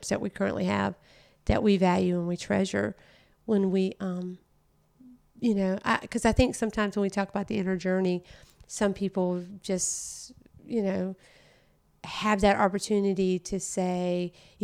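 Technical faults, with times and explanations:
No technical faults can be heard anywhere in the recording; the signal stays continuous and stable throughout.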